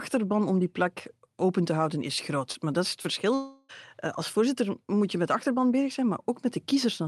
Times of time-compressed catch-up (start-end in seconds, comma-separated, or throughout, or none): none